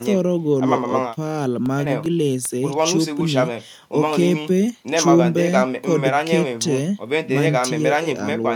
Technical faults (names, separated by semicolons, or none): CD scratch ticks